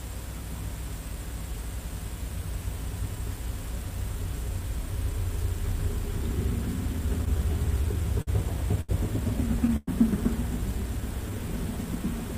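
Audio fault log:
7.25–8.29 s, repeated stalls (stutter): the jitter buffer ran dry eight times as packets arrived late. Each time the receiver extended the last sound, 135 ms in total and at most 52 ms per gap, so about 13% of the stretch is filler. The audio drags and stutters, with nothing lost.
8.81–8.91 s, short stall from a late packet: one packet missed its playout moment, so the receiver held the preceding sound for 76 ms until the packet came in. It then resumed at the same point, leaving a drawn-out sound with a faint buzz or dip and no gap in content.
9.76–9.89 s, call audio freeze: the sound hangs on as a fading buzz or hiss for 110 ms and drops to silence for about 20 ms before the audio carries on where it stopped. The cause is likely packets held up in transit, which emptied the jitter buffer.
10.94–11.53 s, jitter buffer slow-down: to rebuild its reserve, the receiver repeated single pitch periods and fragments of pauses, adding 51 ms. 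Playback runs at about 92% speed with unchanged pitch, so sounds are drawn out.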